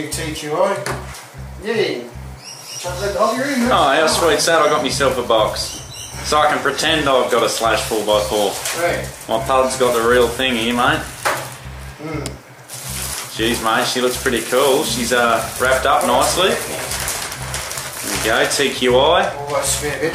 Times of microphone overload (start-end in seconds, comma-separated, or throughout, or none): none